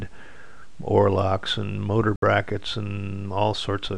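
The audio has a digital broadcast dropout from 2.16 to 2.23 s. The receiver muted on bad frames, losing about 64 ms, which fits two dropped frames.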